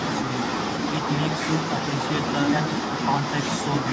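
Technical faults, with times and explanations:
No technical faults can be heard in this speech recording.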